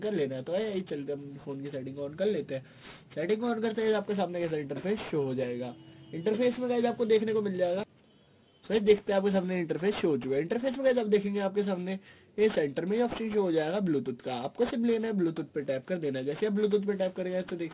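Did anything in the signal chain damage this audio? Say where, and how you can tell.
Yes: aliasing throughout, at sample-rate conversion. Content above a 4 kHz fold folds back as gritty, unrelated tones roughly 20 dB down, which fits an unfiltered drop from 48 kHz to 8 kHz.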